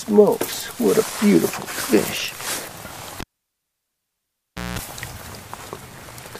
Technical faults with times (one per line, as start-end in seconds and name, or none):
3.20-4.79 cable pulled and plugged in